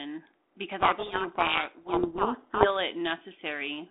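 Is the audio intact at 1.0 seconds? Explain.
No. From 0.8 to 2.68 s a codec payload misread buries the speech in harsh distortion: the G.726 code words arrive with their bit order swapped, so the decoder rebuilds wrong differences. Unlike low-bitrate G.726 hiss, this starts and stops abruptly around otherwise light codec coloration.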